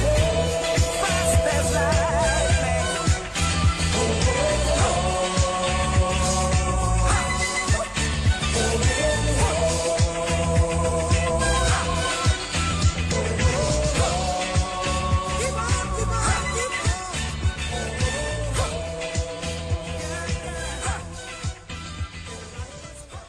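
The audio comes from an adaptive stream starting at a low bitrate. The player opened on a cheap version to start fast, then switched up at 2.0 s. Until then the treble is missing or synthetic and codec artefacts are stronger, which fits roughly 24 kbit/s Opus. Quality then jumps, with no gap, to what sounds like about 64 kbit/s.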